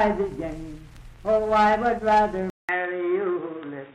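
At 2.5 s, a 0.19 s flat gap in the waveform precedes dull, boxy sound, cut off at 3.8 kHz on the spectrogram, likely an input switched to a poorer device.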